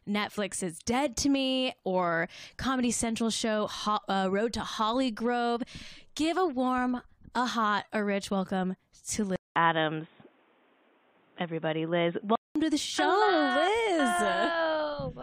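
Input switched to a poorer device in this speech clip, 9.36 to 12.56 s: after "a rich welcome to", a 200 ms gap, then dull audio cut above 3.8 kHz, likely another microphone, until "to the".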